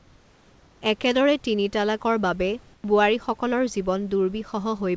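A speech recording with room noise sitting about 35 dB below the voice, carried over a call path whose output stops at 8 kHz, consistent with a wideband codec such as G.722. From 2.74 to 2.84 s, just after "একেদৰে তিনি তালাকৰ বাবে", the natural background drops out for about 100 ms and a flat, featureless hiss, about 4 dB quieter, takes its place. This is comfort noise in place of the background, likely because the sender's voice detector judged the gap silent and paused transmission, leaving the receiver to generate synthetic filler noise until the signal resumed.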